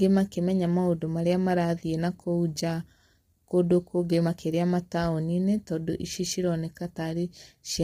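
Throughout the speech, the signal has likely passed through low-delay AAC compression of the AAC-ELD kind, at a rate that fits about 24 kbps. Its short frames resolve harmonics poorly, so the voice sounds heavily rough and grainy, with noise between harmonics and nothing above 17.4 kHz.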